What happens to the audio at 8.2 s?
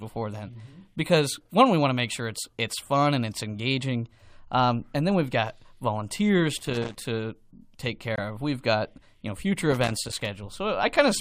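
At about 8.2 s the speech drops out briefly. This is a corrupt frame muted. From 8.16 to 8.19 s there is a gap of roughly 34 ms, which fits a single lost frame. Some bits in that compressed frame were damaged. The decoder rejected it, and the player filled the slot with silence. The hole starts abruptly, as if the sound were switched off. Timing is unaffected, so the speech resumes exactly on schedule.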